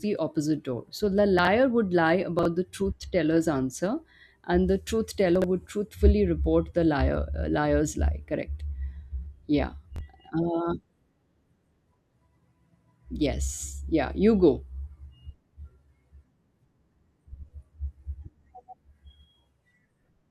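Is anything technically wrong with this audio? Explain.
Yes. Chunks out of order occur at 1.39–1.47 s, 2.39–2.45 s, 5.36–5.44 s and 9.96–10.01 s. A 21.33 ms block plays one to three blocks late, so each span sounds briefly jumbled, with hard joins where the order breaks.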